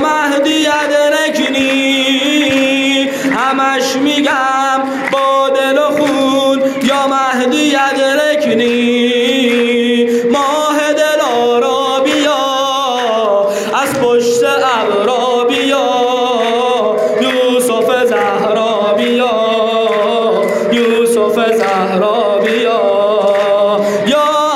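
Gain pumping runs throughout the clip, with a swing of around 5 dB. The likely cause is input gain set far too high, with a fast limiter pulling the level down on each peak and squashing the dynamics.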